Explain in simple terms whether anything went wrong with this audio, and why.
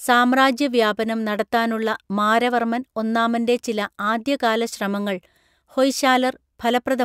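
Nothing went wrong here.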